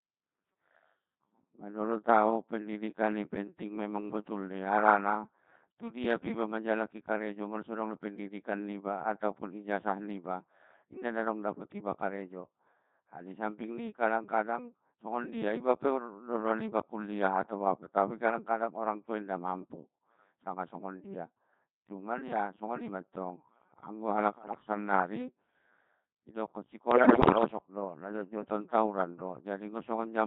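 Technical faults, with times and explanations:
Throughout, Codec 2 vocoder: the speech sounds robotic and buzzy, with a synthetic, hollow edge and heavy smearing of anything beyond a single clean voice. At a rate that fits 2.4 kbit/s, the decoder never receives the actual waveform, only pitch, voicing, energy and a coarse spectral envelope per frame. It rebuilds the voice from sums of sine waves at the estimated pitch, so natural texture is lost and any estimation slips come out as buzz and warble.
24.38–24.60 s, bit errors on digital voice radio: right after "songoni matong anggo halak" the voice lurches in pitch and loudness and breaks into warbling, bleepy gibberish for about 0.22 s. Corrupted bits, at a rate of roughly 7 percent, landed in the vocoder's frame parameters. Because each bit steers the pitch, level, voicing or spectrum of a whole frame, a single flip turns into an abrupt jump in how the synthetic voice sounds.
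26.92–27.44 s, bit errors on digital voice radio: a longer burst of about 0.52 s, just before "do najotjoton tawuran", where the sound dissolves into robotic babble with erratic pitch swings and tone colour changes. The error rate here is heavier, around 10 percent, so many consecutive frames are decoded with nonsense parameters and the synthesiser produces bleeps and warbles instead of coherent speech.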